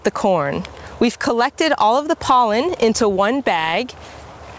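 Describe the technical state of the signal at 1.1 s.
At 1.1 s the signal shows gain pumping, which runs through the whole clip. The gain drops under every loud sound, with a swing of around 15 dB. Loud and quiet parts sit close in level, so the sound feels squashed. The likely cause is input gain set far too high, with a fast limiter pulling it down on each peak. Nothing is heard above 8 kHz, which fits a G.722 call path.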